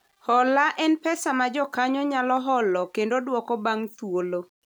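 Throughout the speech, a gritty grain tracks each syllable and vanishes in pauses, unlike steady hiss, likely low bit depth without dither, which fits 10-bit rounding, about 45 dB down.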